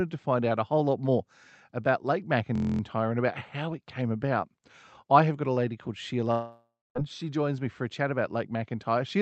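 Speech carried over a call codec that rolls off above 8 kHz, with two faults. From 2.55 to 2.81 s a system hang loop repeats one 23.2 ms slice exactly 11 times, fitting a 1024-sample buffer, and produces a steady 43.1 Hz buzz rather than a fading fill. From 6.31 to 6.98 s, likely a long network dropout, the last sound is stretched into a decaying buzz, followed by about 0.26 s of silence, and speech resumes with roughly 0.64 s missing.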